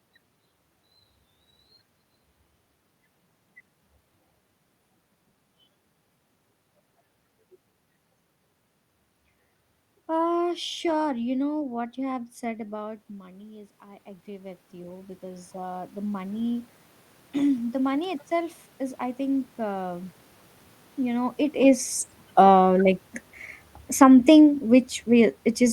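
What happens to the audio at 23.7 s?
Nothing goes wrong at 23.7 s; the speech there is intact, with no dropout, distortion or glitch from the system.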